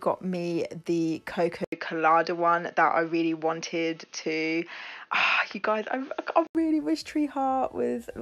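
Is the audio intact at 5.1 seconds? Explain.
No. From 1.64 to 6.55 s the input was likely switched to a poorer device, a narrower-band input with its own noise floor. After an 80 ms silence, the sound turns dull, with nothing above 6.5 kHz and new background noise well below the signal, at much the same level.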